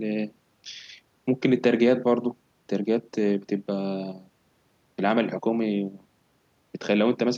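Nothing in the speech recording stood out as a technical problem on listening.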